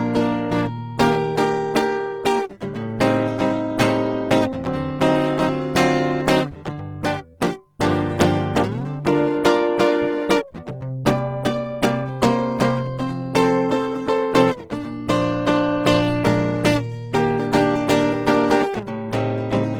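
Throughout the music, tones sound grainy and rough rather than swirling, with content still reaching 20.2 kHz, likely Opus compression in CELT mode at a rate near 16 kbps.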